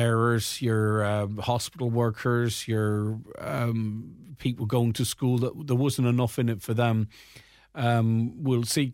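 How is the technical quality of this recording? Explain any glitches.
No glitches or technical faults are audible anywhere in the recording.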